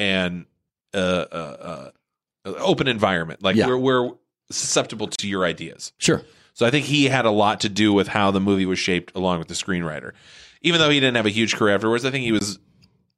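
Speech with two blocks of digital silence: a hard 35 ms hole from 5.16 to 5.19 s between "yeah we're we're susceptible" and "your ideas", and a 19 ms hole at 12.39 s after "huge career afterwards I". Abrupt zero-level edges, rather than fading or smeared concealment, point to an unfilled output buffer.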